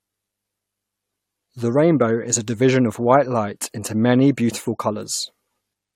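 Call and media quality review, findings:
No transport, capture or processing fault is detectable anywhere in this speech signal, with levels, timing and continuity holding steady throughout.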